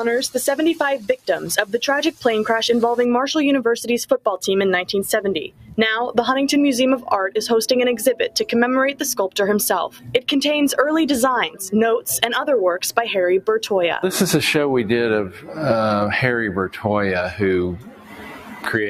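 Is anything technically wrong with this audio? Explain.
Yes. There is a noise suppressor applied to music or sounds throughout the clip. A processor designed to clean up speech is treating steady tones, ambience and reverb as if they were noise and pulling them down. As it opens and closes, the level swings by about 10 dB. Sharp attacks get through, but sustained parts and decays sink, so the whole clip pumps, flutters or sounds thinned out.

There is sound cut by the noise suppressor at 0.98–1.29 s, 5.48–5.78 s, 9.89–10.21 s, 15.29–15.57 s and 17.76–18.67 s. At these points the suppressor mistook the material for noise and clamped down harder than elsewhere. The drops reach about 17 dB at 0.98 s, about 16 dB at 5.48 s and 17.76 s, about 15 dB at 9.89 s, and about 10 dB at 15.29 s. The first four dips each last a fraction of a second. The final one, near the end, affects roughly a second of sound.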